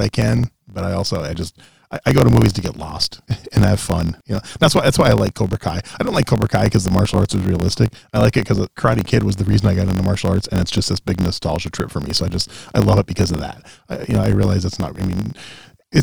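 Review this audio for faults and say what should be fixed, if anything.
A block size mismatch (truncated) runs through the whole speech clip: one stage hands over blocks longer than the next stage takes in, and the leftover tail of every block is dropped. Each cut leaves a small discontinuity, and their repetition forms a steady buzz at 45.9 Hz. Losing that tail each time also makes the speech play about 1.07 times faster while its timbre stays the same; the blocks being written are 1024 samples long. To prevent it, make every stage agree on one block size, or buffer between them so no samples are discarded.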